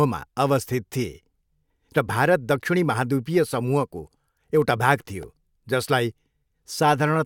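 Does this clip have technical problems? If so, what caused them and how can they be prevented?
Yes. At 5.23 s, just after "एउटा भाग", a repeated buffer gives a brief buzz: one 1.33 ms piece, which fits a 64-sample buffer, replays three times, unlike a dropout's silent gap. A larger playback buffer or higher-priority audio thread prevents this.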